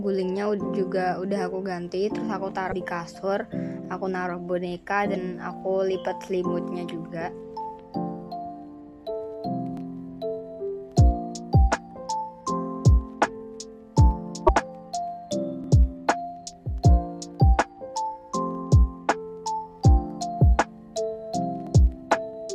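At 2.71 to 2.74 s a brief broken glitch of about 30 ms cuts through the audio, likely a broken MP3 bit reservoir. After frames are lost, the next frame decodes against the wrong bytes, so the sound jumps ahead, with the disturbance spanning roughly one 26.1 ms frame. The same glitch recurs at 5.14 to 5.17 s and 14.46 to 14.49 s.

At 3.85 to 3.88 s there is a stutter from overlapping chunks. Each 6 s processing chunk begins before the previous one ends, so 25 ms of audio plays twice at the join. This recurs at 9.77 to 9.80 s, 15.64 to 15.67 s and 21.67 to 21.69 s.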